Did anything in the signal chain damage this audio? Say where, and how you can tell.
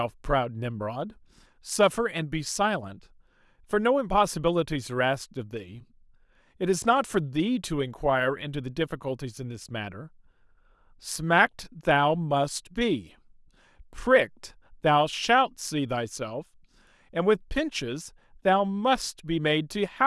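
No, nothing along the way seems to have harmed this speech recording, and there's no point in it where any stage of the chain leaves a mark you can hear.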